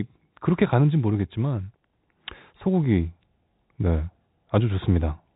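No technical faults are audible anywhere in this speech.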